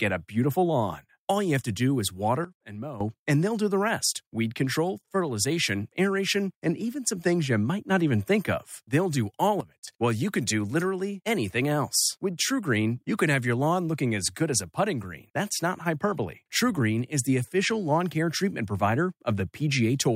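At 2.45 s, after "do is", the speech drops about 12 dB in one step, background included, until 3.01 s, before "and they'll do the". At 9.61 s, after "do all", it drops about 15 dB until 9.88 s. Both are sudden gain jumps, likely from a gain setting applied without a ramp.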